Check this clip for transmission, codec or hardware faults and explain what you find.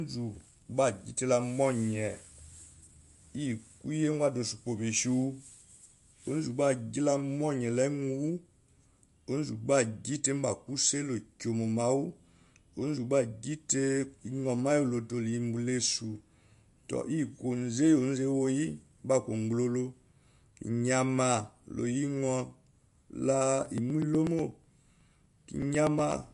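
Two faults are present: codec damage throughout the speech, and a run of regular dropouts near the end.

MP3 compression, likely the cause of the plainly audible, watery and swirly texture heard throughout, with nothing above 11.2 kHz. The encoder appears starved of bits, consistent with a rate near 47 kbps, so weak spectral lines flicker between frames and sibilants turn metallic.

Periodic USB or driver dropouts run from 23.66 s to 26.24 s, repeating every 0.123 s, about twenty in all. Each time a blocked bus or driver skips roughly two milliseconds of audio outright, and each gap is heard as an evenly spaced tick whenever speech is present.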